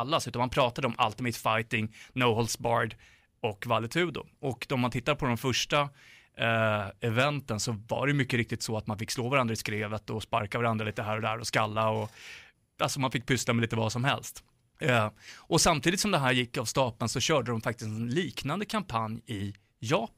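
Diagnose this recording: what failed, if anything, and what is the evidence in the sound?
Nothing failed: no stage from capture through playback leaves any audible trace of trouble in the speech.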